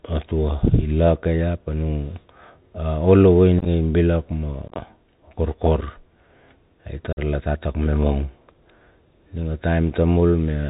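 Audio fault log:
Throughout: Bluetooth CVSD headset codec. The speech passes through a narrowband 64 kbps one-bit delta coder that cuts everything above 4 kHz, so it sounds muffled, with scratchy s sounds, distortion on loud high sounds, and a granular hiss beneath.
3.59–3.67 s, 4.68–4.75 s, 7.13–7.19 s: unconcealed Bluetooth headset packet loss. Headset voice packets went missing and nothing filled the gaps, leaving abrupt holes of about 41, 56 and 45 ms. The first two are scattered and chop the speech roughly, and the last falls just before "la tatak me mong".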